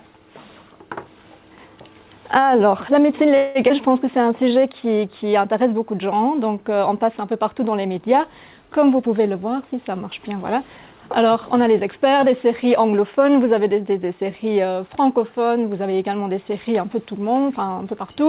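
At 3.36 s the sound stops advancing for about 189 ms, until 3.57 s. The last moment is held and stretched into a fading buzz rather than dropping to silence. When the audio resumes it carries on from exactly where it stopped, with nothing lost, so the effect is a pause inserted into the timeline. This is a call audio freeze, likely caused by packets stalling in transit and the jitter buffer running dry. The inserted pause pushes the playout delay up by the same 189 ms.

Shortly after, at 3.69 s, there is a skip ahead. Roughly 70 ms of audio is gone, and the two sides are butted together with only a few milliseconds of joining material. The jump cuts the playout delay back by about the same amount. A stretch was dropped, either in transit or by the jitter buffer when it overflowed, while later audio was already waiting. The result is a small abrupt splice rather than a gap.

From 3.88 to 4.82 s a jitter buffer slow-down follows. 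Playback runs at 92% speed while pitch stays unchanged. The receiver repeats individual pitch periods and fragments of pauses many times over to rebuild its reserve, adding 80 ms in total. Sustained portions come out slightly drawn out.

Between 8.99 and 10.94 s the opposite correction occurs: a jitter buffer speed-up. The buffer is holding more than its target, so the receiver trims short pieces of one or a few pitch periods in quick succession. About 200 ms is removed, and the audio plays at 110% speed at its original pitch. It sounds noticeably hurried across those two seconds. All of this sits on a narrowband call path with nothing above 4 kHz, consistent with G.711 mu-law at 64 kbps.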